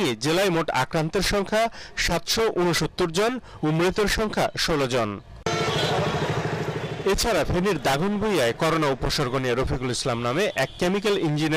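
Nothing in the audio stood out as a technical problem on listening.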